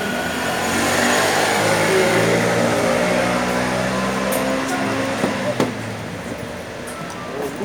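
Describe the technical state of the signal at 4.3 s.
At 4.3 s the sound comes through intact, with no dropout, distortion or other technical fault at that point.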